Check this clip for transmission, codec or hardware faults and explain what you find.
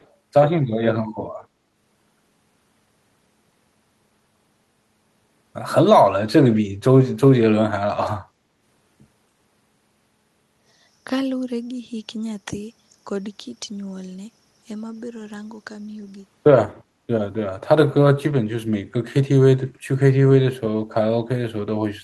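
Two faults are audible in the speech.

From 0.0 to 0.07 s there is a very faint delayed copy of the voice, roughly 40 dB below it and trailing by 269 ms. This is likely an echo leak, where a far-end loudspeaker's output reached its microphone and the echo canceller failed to fully remove it.

From 8.37 to 8.58 s the background is gated by the echo canceller. The room sound dips by about 6 dB for roughly 150 ms in total, then recovers. The canceller pulled the microphone gain down while the loudspeaker was active and released it afterwards.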